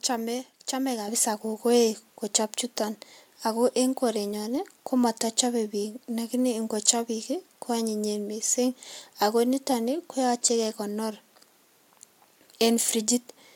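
In this speech clip, at 1.08 s the whole sound jumps abruptly louder by about 7 dB, with the voice and the room background rising together in a single step. That is a microphone volume stepped up: the call software judged the input too quiet and raised the device's input gain at once.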